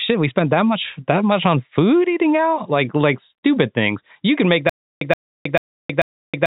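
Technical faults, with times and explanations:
4.69 s to the end, stutter with silent gaps: right after "can make", a short 123 ms burst of speech plays, drops into about 318 ms of dead digital silence, then comes back, four times in all at a steady 441 ms pace. It's likely the stream stalling and replaying its last buffered fragment on each retry, so whatever should have followed is simply gone. The telephone-band sound, cut off near 3.8 kHz, carries straight into the stutter.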